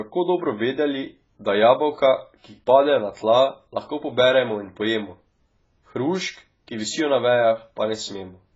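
Throughout the speech, the sound is dull and smeared, with a fizzy, warbling edge on sibilants and nothing above about 7.6 kHz. This is likely heavy AAC compression, a damage level that points to AAC-LC at around 16 kbps.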